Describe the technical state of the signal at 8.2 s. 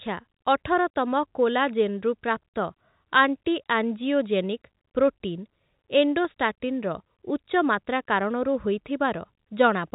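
At 8.2 s the speech is intact, with no fault, and it carries the band-limited sound of G.711 telephone coding, which passes nothing above about 3.8 kHz.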